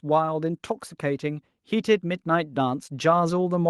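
From 0.05 s to the end at 3.69 s, automatic gain rising is heard: the gain control judged the input too quiet and kept turning it up. Voice and background noise swell together steadily, unlike compressor pumping, which ducks and recovers around each loud sound.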